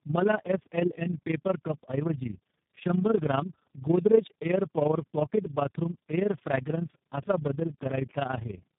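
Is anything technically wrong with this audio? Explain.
Yes. Throughout, the speech sounds rough, muffled and warbly. This is tandem speech coding: the signal was decoded and re-encoded at each link, with each coder working on the previous coder's damage. The sound fits three low-rate speech codecs in a row, ending in one like G.729A.

The whole clip also has a fast flutter, a level pulsing of about 11 dB at roughly 30 times per second. This is overlap-add ripple: windowed frames were rejoined with an overlap that doesn't sum to constant gain, so the level dips once every frame.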